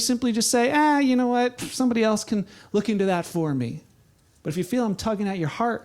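A short recording of speech, with no technical fault anywhere in it. Nothing heard points to a problem in how the sound was captured or reproduced.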